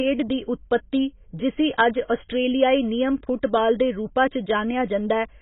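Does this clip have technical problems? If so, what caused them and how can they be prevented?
Yes. AAC compression damages the speech throughout. Nothing sounds above about 3.8 kHz, so it is dull. Sibilants turn fizzy and smeared as coarse quantisation starves the spectrum. The heavy damage points to a bitrate near 16 kbps, likely from AAC-LC. Encode at a higher bitrate to prevent it.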